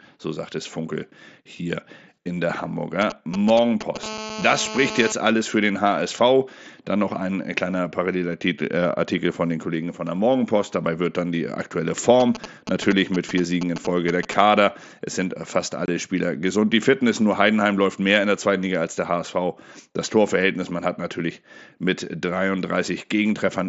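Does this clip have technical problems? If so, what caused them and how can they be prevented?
Yes. GSM signalling bursts appear from 3.01 to 3.97 s and again from 12.20 to 14.34 s, as a galloping run of ticks and brief buzzes at 217 Hz, roughly 10 dB below the speech. A 2G handset nearby was exchanging short control transmissions with its network, and the audio wiring or an input stage picked up the radio pulses and rectified them into audible clicks at the burst rate. Keeping phones at least a metre from microphones, cables and interfaces, or switching them to airplane mode, prevents this.

GSM phone buzz follows at once, from 4.03 to 5.12 s: a continuous, harsh 217 Hz rasp rich in harmonics, about 9 dB below the speech and unrelated to it. This is the same interference in its steady form. The handset was transmitting its regular 217-per-second bursts, and the audio circuit demodulated that pulsing envelope into a buzz. 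Moving the phone away or disabling its radio removes it, as do shielded, well-grounded cabling and inputs with RF filtering.

Unconcealed Bluetooth headset packet loss occurs at 15.86 s, where the speech drops out for about 22.5 ms with abrupt edges. Voice packets between headset and phone failed to arrive, and the receiver inserted silence instead of reconstructing the missing audio. A gap of that length fits roughly three lost packets over the mSBC link. Keeping the headset close to the phone with a clear line of sight and away from crowded 2.4 GHz traffic prevents this.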